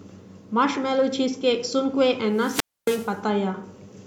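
At 2.34 s a wireless microphone squelch dropout begins. The FM radio link weakens, hiss swells, then the receiver's squelch mutes the speech for about 0.27 s before it returns by 3.17 s. A spectrogram shows broadband noise, a blank gap, then speech bands resuming.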